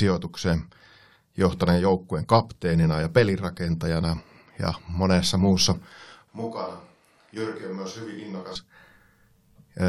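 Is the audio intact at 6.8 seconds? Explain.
No, from 6.28 to 8.55 s, after "pelirakentajana ja monessa muussa", speech turns abruptly hollow, roomy and thin, roughly 10 dB quieter. This is likely a switch to a distant microphone, distinguished from a plain gain drop by the added room sound and background noise.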